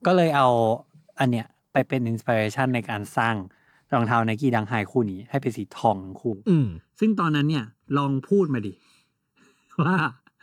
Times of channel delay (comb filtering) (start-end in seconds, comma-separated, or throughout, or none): 6.33-10.42